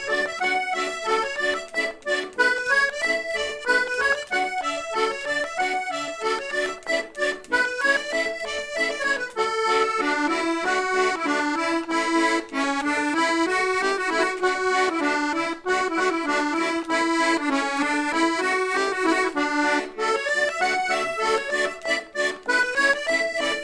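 No technical faults are audible.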